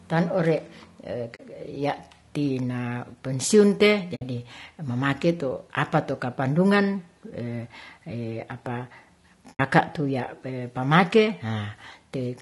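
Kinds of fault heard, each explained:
Low-delay AAC compression, throughout: the speech sounds rough and grainy, with noise between harmonics, likely from AAC-ELD's short frames at a bitrate near 32 kbps.
AAC frame loss with muting, at 1.35, 4.15 and 9.54 s: soft-edged silent holes of 40, 60 and 60 ms where missing frames decode as zero spectrum.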